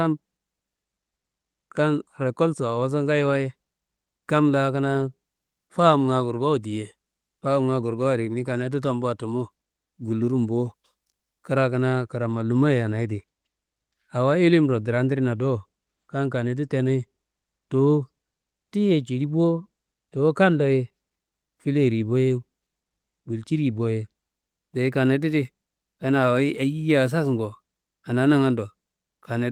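No technical faults can be heard in this speech recording, which sounds like an ordinary call passed through the Opus codec with its top end stopping at 12 kHz.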